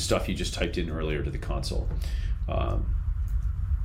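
No technical faults can be heard anywhere in the audio, and the signal holds steady throughout.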